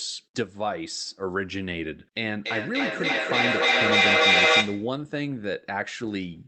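From 2.21 to 5.02 s there's feedback echo between two devices: a second device in the room replays the call and its mic sends it back. Repeats come every third of a second or so, and they pile up to about 11 dB above the speech.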